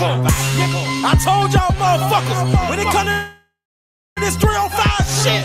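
Packets were likely held up in transit long enough for the receiver's jitter buffer to run dry, producing a call audio freeze from 3.11 to 4.19 s. The receiver stretches the last sound into a fading buzz or hiss that dies to silence for about 0.62 s of the roughly 1.05 s fill. When the audio resumes, it carries on exactly where it stopped with nothing lost, but everything after it now runs about 1.05 s late.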